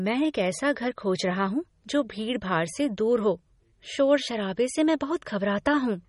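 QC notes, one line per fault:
Throughout, MP3 compression: nothing above 11.1 kHz, and the speech sounds plainly watery and swirly, likely from a low bitrate around 32 kbps starving the encoder of bits.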